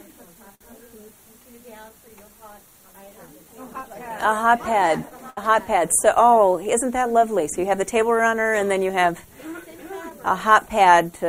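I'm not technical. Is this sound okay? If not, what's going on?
No, not quite. There are a few timing problems, all of the kind you get when audio travels over a network in small packets and the receiving end has to keep it flowing smoothly.

The main one is clock drift between sender and receiver. The device sending the audio keeps time about 5 percent slower than the one playing it. The receiver keeps running short and has to fill in now and then, so the whole thing never quite sits steady.

To cope, the receiver makes repeated timing corrections from about 0.08 s right through to 11.26 s. It stretches the sound slightly, playing at roughly 97 percent speed, and adds up to about a third of a second overall. You may notice a faintly slow or uneven pace rather than any single glitch.

At 0.55 to 0.62 s there's a short stall from a late packet. A chunk of audio arrived 58 ms late, so the receiver held the last bit of sound until it caught up. 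Nothing is lost, but that moment hangs a touch too long.

You'll also hear scattered short gaps twice: about four between 1.89 and 2.95 s, and about five between 10.10 and 10.93 s. Each is a tiny hole, around 10 ms, patched over by continuing the sound, so they come across as little ticks or smudges.

The roughest patch is repeated stalls (stutter) from 3.73 to 5.38 s. The audio ran dry nine times, the longest wait being 70 ms, and each time the last sound was stretched to cover it. Nothing goes missing, but that stretch drags and stutters.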